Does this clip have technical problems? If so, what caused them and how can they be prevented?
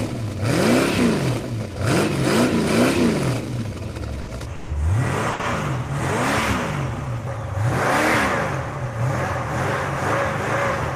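Yes. There are bursts of packet loss at 4.21 to 4.29 s, 4.55 to 4.71 s and 5.33 to 5.41 s. Runs of packets arrived too late or not at all. The receiver stretched the last sound and faded it, and 60, 140 and 60 ms of audio are missing. A steadier network path or a deeper jitter buffer would prevent this.

Short concealed packet loss occurs at 5.29 to 5.33 s and 5.41 to 5.45 s, right around the third burst. Each time, about 20 ms never reached the decoder. The receiver filled the hole from the preceding sound, leaving a brief smear. Forward error correction would help recover such small losses.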